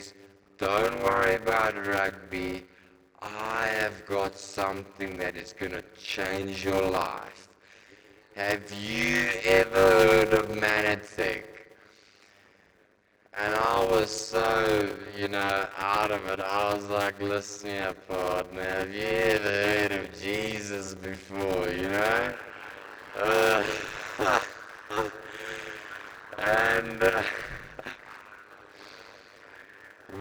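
From start to end, a steady buzz at 100 Hz sits under the sound, which also plays slowly, at roughly 0.53 times its proper speed, while keeping about its normal pitch. This is a block size mismatch (padded): one stage hands over 256-sample blocks to a stage reading longer ones, which fits a 480-sample read at 48 kHz, and the shortfall in every block is filled with silence. Those regular gaps produce the buzz and stretch the timing.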